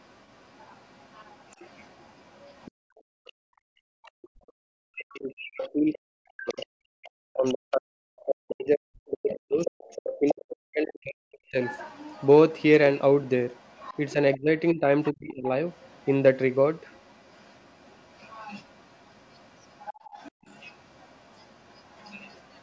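From 0 to 4.11 s, the other side's voice leaking through is faint, around 35 dB below the talker, most likely loudspeaker echo that the canceller failed to fully remove.

Between 2.71 and 3.93 s, the echo canceller clamped the microphone while the loudspeaker played. This background gating drops the room sound by up to about 37 dB for roughly half a second in total.

From 3.43 to 11.57 s, the talker and the far end overlap. The speech suppressed in double talk loses about five seconds in pieces, dipping by around 40 dB, likely because the canceller mistook the talker for echo. Within that span, leakage of the other side's voice grows much louder: about 15 dB below the talker from 5.59 to 8.25 s and about 10 dB below from 9.31 to 10.34 s, so a second voice comes through.

From 11.62 s to the end, the leakage continues at about 25 dB down. A further double-talk dip from 14.13 to 15.47 s cuts around 25 dB from the speech for under a second. 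At 20.32 to 20.44 s, gating briefly drops the background by about 37 dB.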